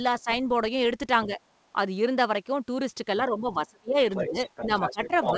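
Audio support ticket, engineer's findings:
Speech suppressed in double talk at 0.21–0.28 s, 1.26–1.39 s, and 3.28 s to end. Level dips about 10, 5, then 20 dB, likely echo canceller attenuating near-end during overlap.

Other side's voice leaking through from 3.9 s to end, about 5 dB under the talker. Likely residual loudspeaker echo the canceller failed to remove, audible within the G.722 band limit at 8 kHz.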